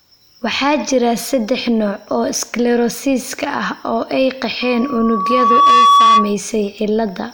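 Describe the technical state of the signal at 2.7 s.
At 2.7 s the signal is intact, with no dropout, clipping, glitch or other technical fault present at that point.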